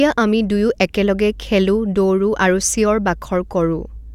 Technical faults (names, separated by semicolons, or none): none